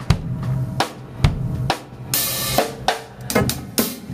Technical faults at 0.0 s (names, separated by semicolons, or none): gain pumping